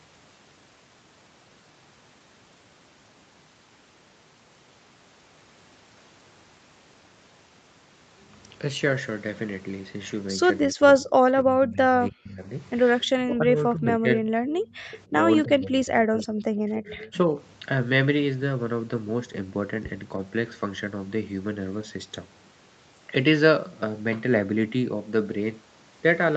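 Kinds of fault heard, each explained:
Speech suppressed in double talk: from 10.62 to 17.36 s, while the far side was talking too, the voice dips in four stretches, most deeply by about 35 dB in the first stretch. This is likely an echo canceller unable to separate the talker from the loudspeaker echo, so both were turned down.
Echo leak: at 14.5 to 14.98 s and 16.84 to 17.12 s, a faint copy of the voice trails by about 0.3 s, around 25 dB below the speech, likely residue a loudspeaker-side echo canceller failed to remove and sent back.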